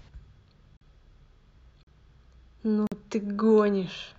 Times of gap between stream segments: 0.77-0.81, 1.83-1.87, 2.87-2.92

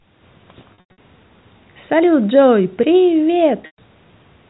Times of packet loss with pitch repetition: 0.74-0.98, 3.62-3.78

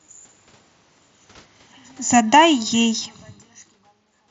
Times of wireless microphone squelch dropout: none

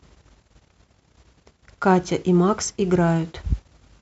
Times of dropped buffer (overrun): none

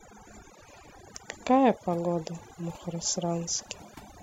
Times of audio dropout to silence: none

